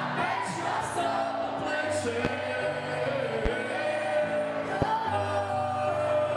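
Three sharp loud pops jump out of the audio at 2.25–2.28 s, 3.46–3.49 s and 4.82–4.85 s, each a single hit roughly 15 to 20 dB above the surrounding sound, which continues beneath them. They are likely brief voltage spikes from a plug, switch, static or driver glitch.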